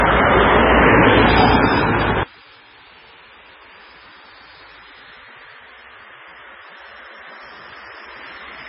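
MP3 compression throughout this everyday-sound clip: nothing survives above 5.4 kHz, and the heavy watery smearing fits a very low bitrate near 15 kbps, likely starved of bits. One channel inverted from 2.23 s to the end: summed to mono the level drops about 26 dB, as opposite-polarity channels likely cancel their shared content, leaving a faint residue.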